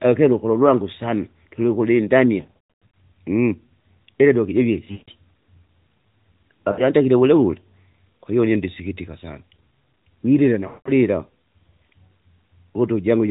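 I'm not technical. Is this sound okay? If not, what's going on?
No. The speech has lost AMR speech frames, dropouts from the phone network. Near 2.42–2.94 s, after "iledoki jivie" at 4.92–5.10 s, at 6.72–6.88 s and at 10.68–10.91 s, the phone decoder guessed the missing bits, so the voice smears, fades, or returns rough.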